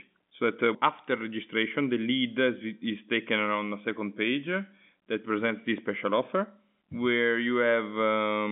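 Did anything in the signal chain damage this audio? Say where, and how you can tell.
No, nothing in the signal chain damaged this speech. It has the narrow sound of G.711 telephone coding, consistent with a 64 kbps mu-law line carrying roughly 150 Hz to 3.6 kHz, with nothing above 3.8 kHz.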